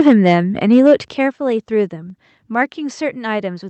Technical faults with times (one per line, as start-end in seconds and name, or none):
0.00-0.35 microphone overload
0.08 microphone volume stepped down
0.72-0.94 microphone overload
1.08 microphone volume stepped down
2.10 microphone volume stepped down